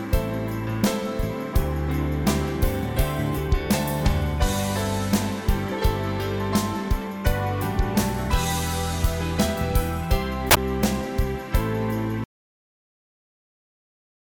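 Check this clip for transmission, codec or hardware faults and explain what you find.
Two faults are audible: a corrupt FLAC frame near 10.5 s and a dropout to silence that starts at 12.24 s and runs to the end.

From 10.50 to 10.57 s the audio is damaged, the mark of a corrupt FLAC frame. Flipped bits went unnoticed because the checksum was not verified, so the decoder's prediction ran on wrong values, at worst until the frame boundary. The damage spans roughly 70 ms, which points to two consecutive frames. Unlike a dropout, it corrupts the signal rather than removing it, and the sound after 10.57 s is clean again.

At 12.24 s the sound cuts off abruptly into silence that lasts until the clip ends. This is an audio dropout to silence. The input was likely lost, for example through a disconnected device or a failed link, while recording continued with silence. A noise gate or fade would leave some room tone or taper off. 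Here the signal stops instantly and leaves nothing at all.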